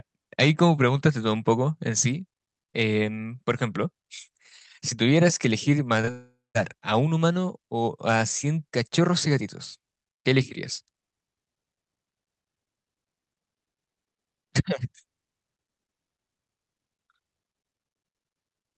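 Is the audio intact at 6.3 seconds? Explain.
No. From 6.11 to 6.57 s the speech breaks off and the last sound is stretched into a fading buzzy hiss, which thins to near silence for the final part before the voice resumes with a chunk skipped. This is likely a long network dropout: about 0.44 s of audio never arrived, and the receiver filled the gap by extending what it last had. The audio on either side keeps the call codec's 8 kHz ceiling.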